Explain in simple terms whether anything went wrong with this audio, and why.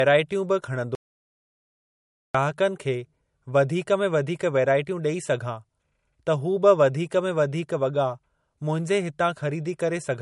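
Between 0.95 and 2.35 seconds the speech cuts out completely for about 1.4 seconds, leaving dead silence with no room sound at all. This is an audio dropout to silence. The input was likely lost briefly while the recorder kept writing silence, so that stretch of speech is gone.

Throughout the clip the speech sounds dull and smeared, with nothing above about 11 kHz. This is low-bitrate audio saved at a high bitrate. It was likely squeezed into a small MP3 first and then saved again as a larger one, which cannot restore what was removed.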